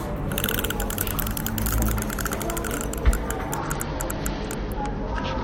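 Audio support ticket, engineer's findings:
Bluetooth SBC bit pool drop, 3.58 s through to the end of the clip. Treble goes dull and gritty noise comes up. It sounds like the phone throttled the SBC bit pool on a congested link, consistent with 28 dropping to 9 and about 78 kbps. The top sub-bands get starved of bits and the rest are coarsely quantised. No recovery before the clip ends.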